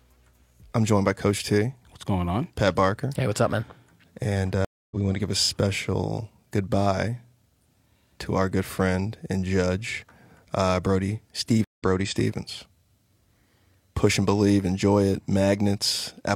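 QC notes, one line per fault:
4.65–4.96 s and 11.64–11.83 s, stream reconnect: 262 ms and 140 ms silent gaps (flat waveform, blank spectrogram columns) as the connection drops; fresh decoder fades in roughly 0.2 s and 0.15 s later, skipping speech.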